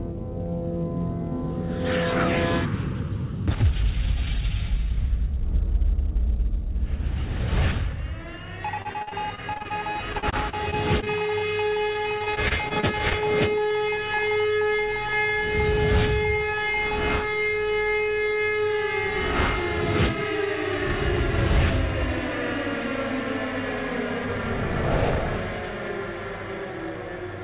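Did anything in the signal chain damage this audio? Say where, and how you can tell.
Yes. Repeated packet loss (robotic sound) occurs from 8.82 to 11.43 s and again from 11.93 to 13.15 s, a network-stage fault in the call path. Short holes come one after another, each under about 48 ms. Some are patched by continuing the last bit of sound, which gives the choppy character, and others simply drop out. About a fifth of the first stretch and about 15% of the second is concealed. Throughout, the narrow 4 kHz top is the G.711 call codec, not damage.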